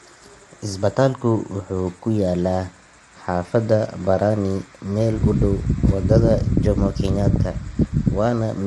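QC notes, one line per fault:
Throughout, low-delay AAC compression. The speech sounds rough and grainy, with noise filling the gaps between pitch harmonics. Nothing is heard above 11.6 kHz. The likely cause is AAC-ELD at a low bitrate near 32 kbps. Its short frames resolve harmonics poorly.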